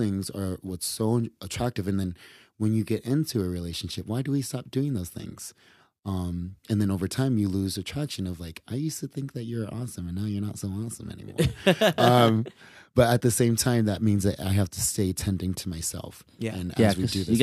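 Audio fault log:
There is no fault to log for this speech clip.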